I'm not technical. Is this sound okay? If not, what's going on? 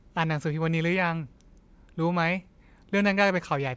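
Yes, this sound is okay, and there's nothing going on that needs fixing.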